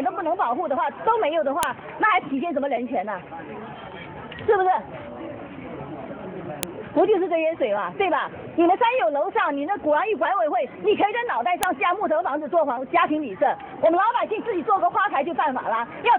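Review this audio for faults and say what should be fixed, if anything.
Sharp, loud clicks snap through at 1.63, 6.63 and 11.63 s, exactly 5 s apart, regardless of the surrounding audio. This is a file header played as audio: 5 s WAV pieces were joined with each header left in, so its bytes sound as samples. To prevent it, strip the header from every piece before concatenating or streaming.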